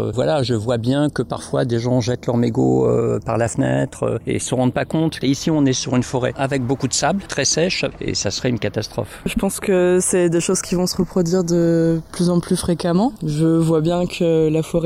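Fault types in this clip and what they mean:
Channels drifting apart, throughout: the left and right channels behave as if captured on devices running from separate clocks, one running fast by a few tens of parts per million, so the delay between them keeps creeping, reaching about a third of a millisecond by the end. Folded to mono, that shifting offset drags comb-filter notches slowly across the spectrum, giving the sound a gradual flanging sweep.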